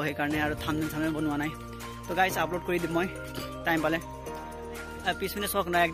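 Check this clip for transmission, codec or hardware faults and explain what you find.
No faults turn up in this clip.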